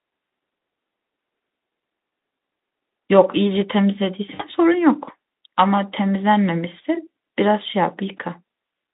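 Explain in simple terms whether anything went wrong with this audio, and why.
Around 4.34 to 4.43 s there's a short hiccup from VoIP packet loss concealed by the speech codec. About 60 ms of audio never arrived, roughly three 20 ms frames, so the Speex decoder guessed by stretching what it last had. You hear a brief buzzy or noisy smear that dips before the sound recovers.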